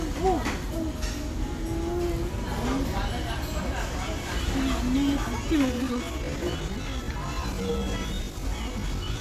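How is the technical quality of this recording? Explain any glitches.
There is one glitch near the end. A time-stretched section runs from 5.62 s to 9.20 s: the sound slows to about 0.74 times its pace while pitch holds. This is likely stretching software repeating short fragments, so it drags.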